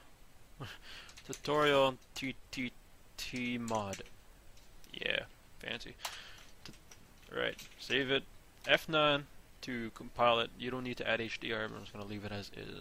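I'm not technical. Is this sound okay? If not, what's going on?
No. From the start to about 2.21 seconds there is crude rate conversion. The audio was switched to a different sample rate the cheap way, by repeating or skipping individual samples instead of filtering them smoothly. This fits a change from 44.1 kHz to 48 kHz. The skips and repeats follow a fixed pattern. They create stray, out-of-tune copies of the sound, heard as a gritty buzz or fizz on the louder and higher parts.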